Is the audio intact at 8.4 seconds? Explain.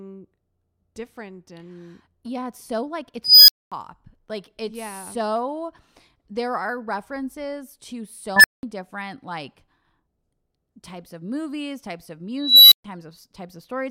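No. An unstable filter hits from 8.36 to 8.63 s, after "there are references to". Runaway feedback swells a roughly 2 kHz squeal within 76 ms, then 192 ms of silence.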